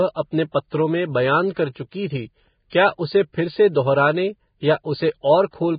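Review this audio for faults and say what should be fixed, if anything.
Throughout the speech, nothing reaches above 4.9 kHz and the remaining treble is grainy noise, likely heavy Vorbis compression near 15 kbps, unlike a clean low-pass filter. Prevent this by encoding at a higher Vorbis quality setting.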